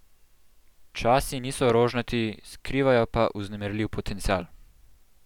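At 1.70 to 1.72 s there's a loud pop, a single sharp click that jumps roughly ten decibels above the speech while the talking carries on underneath. A second, softer pop follows at 4.31 to 4.33 s, only around five decibels over the level. Each sounds like a brief electrical pulse landing in the signal path, likely a loose plug, a switch or a static discharge, with the downstream circuitry shaping it into that quick thump.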